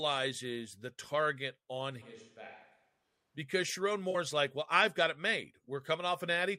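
From 2.03 to 3.37 s the speech turns abruptly hollow, roomy and thin, roughly 10 dB quieter with room noise rising. This is likely a switch to a distant microphone, since the sudden change and return rule out gradual reverb. At 4.10 to 4.15 s, AAC frame loss with concealment leaves a 43 ms smeared, phasey patch, consistent with two lost frames. It is filled in rather than silent, unlike a plain dropout.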